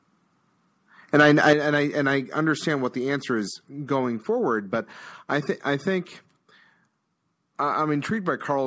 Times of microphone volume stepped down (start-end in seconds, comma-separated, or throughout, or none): 1.53, 2.55